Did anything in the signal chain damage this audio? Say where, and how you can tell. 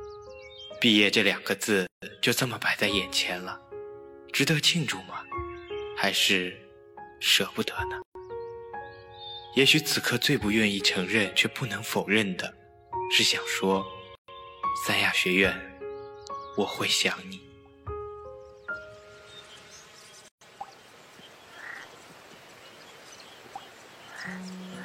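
Yes. At the codec stage, gaps at joins of encoded pieces open about every 6 s (1.87–2.02, 8.02–8.15, 14.15–14.28, 20.28–20.41 s) and last 130–154 ms. They come from encoder delay and end padding that were never trimmed. On a spectrogram or waveform they appear as blank vertical bands with slightly smeared edges, and the sound resumes where it stopped.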